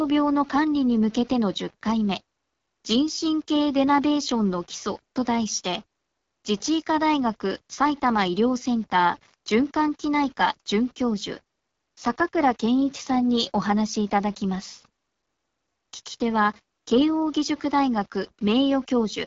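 Throughout the speech, quiet passages sound gritty and grainy. The distortion follows the signal, roughly 30 dB down. Likely cause: low bit depth without dither, around 7-bit rounding.

The AMR wideband (HD Voice) codec also runs throughout. Speech sounds rough and raspy, with nothing above 7.4 kHz. This points to a low rate near 8.85 kbit/s.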